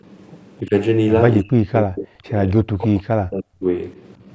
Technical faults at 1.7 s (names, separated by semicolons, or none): speech suppressed in double talk